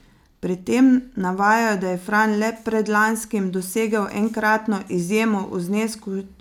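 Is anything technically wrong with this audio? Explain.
No technical faults are audible.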